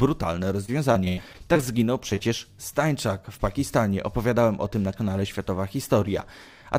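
From 0.65 to 1.64 s, repeated packet loss leaves nine gaps, the longest 88 ms, each patched by extending the prior sound. Roughly a quarter of the stretch is filled in, giving choppy audio with pieces missing. Then short concealed packet loss drops two brief chunks, at 2.10 to 2.13 s and 2.15 to 2.19 s. The receiver bridges each one, leaving a quick smear or wobble.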